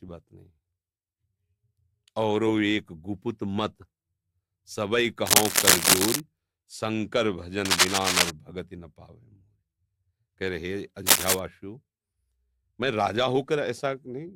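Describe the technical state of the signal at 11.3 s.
At 11.3 s the signal carries cable scratch noise. It runs from about 11.05 s to 11.40 s. Dense, uneven bursts of crackle sit over the sound, a little louder than the audio beneath them. The effect is a brief scratching, rustling layer. The likely cause is a worn cable, connector or control being moved. Its contact resistance then jumps around rapidly, and those rapid changes break through as noise.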